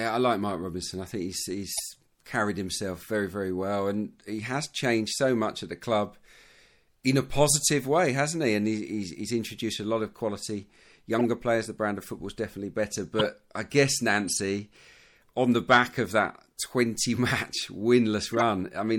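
A speech clip with audible compression damage throughout. The sound is watery and swirly, and the treble stops short. Sibilants chirp with a metallic edge. Onsets smear. The likely cause is MP3 compression at a low bitrate, which fits something near 64 kbps. Starved of bits, the encoder cuts the top band and drops weak frequency lines. Those lines flicker on and off between frames. Six short bursts also break through, each a corrupt frame decoded. They come at 1.72 s, just after "I think he's" and before "carried himself very very". Others follow at 11.19 s and 13.19 s, the latter right after "football is definitely better" and before "I guess". The next is at 14.28 s, following "I guess", then 16.62 s and 18.31 s. Each lasts well under a fifth of a second. They sound like chirps and squeaks. Damaged data in a few frames was played anyway, putting energy at wrong frequencies. The loudest bursts, at 13.19 s and 18.31 s, peak near -10 dBFS. 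The one at 16.62 s is faintest.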